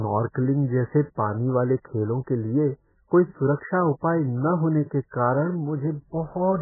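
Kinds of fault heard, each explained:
MP3 compression: The speech has nothing above 2.1 kHz, so it sounds dull and muffled throughout. The codec damage is heavy, and weak frequency detail is stripped away, leaving a watery, swirly texture. The likely cause is a very low bitrate, around 8 kbps.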